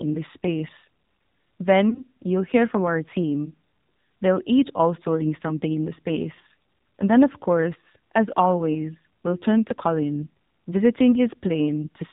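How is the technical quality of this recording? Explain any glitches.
The technical quality is poor: the whole recording has passed through a low-rate mobile speech codec, and there is one brief dropout near the start.

Throughout, the speech was squeezed through the AMR narrowband mobile codec. Nothing above 4 kHz survives, and the vocal tract model gets too few bits to rebuild the voice cleanly. The voice sounds muffled, buzzy and plainly synthetic, which fits a low mode around 7.4 kbps.

From 1.90 to 2.02 s, one AMR speech frame was lost, just before "you'll hear from our". That frame failed its checksum, so the decoder filled its 20 ms by repeating the previous pitch and vocal tract settings at falling gain. The result is a short dip or warble before the voice recovers.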